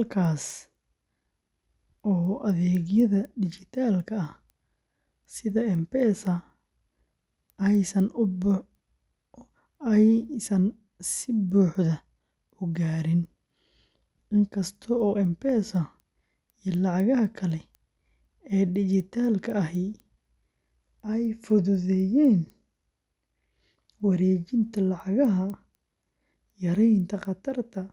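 From start to finish, the speech carries a steady train of small ticks at 4 per second, audible only while the signal is present. This is a resampler restarted on every block. Each 250 ms block was converted on its own, most likely from 24 kHz up to 48 kHz, so the interpolation filter lacked the neighbouring samples at every block edge. The resulting error at each boundary is heard as a tick.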